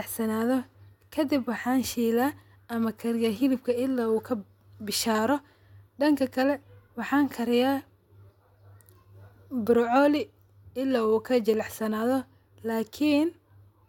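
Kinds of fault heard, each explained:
Nothing stood out on listening to this speech recording.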